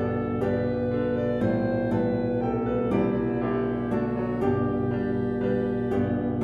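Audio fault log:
Throughout, mains hum: a steady 60 Hz drone with some low harmonics sits under everything, and it's about as loud as the sound itself. That's the power line leaking into the signal path, likely through a ground loop or a nearby transformer.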